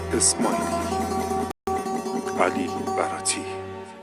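The player likely ran short of data or had its output thread blocked, causing a playback stall from 1.51 to 1.67 s. The audio cuts to silence in mid-flow for about 160 ms, then resumes, leaving an abrupt, audible gap in the sound.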